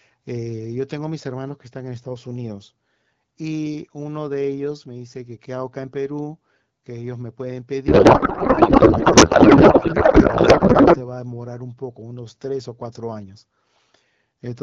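Speech carried over the AMR wideband (HD Voice) codec, whose clear, lightly coded sound fits a 12.65 kbit/s mode, suffers a codec payload misread from 7.88 to 10.98 s. Octet-aligned AMR frames are being unpacked as bandwidth-efficient, so the decoder reads shifted fields, and the speech turns into garbled noise and warble that barely tracks it until the packing matches again.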